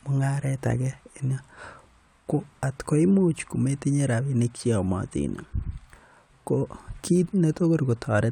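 No technical faults are audible anywhere in this speech recording.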